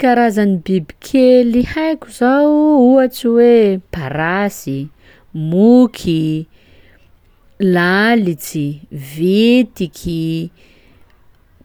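No technical faults are audible anywhere in the recording.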